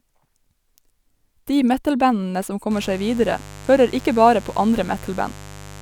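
Speech clip with mains buzz from 2.71 s to the end: a steady, raspy 50 Hz buzz about 20 dB below the speech, rich in harmonics, from switching spikes leaking in.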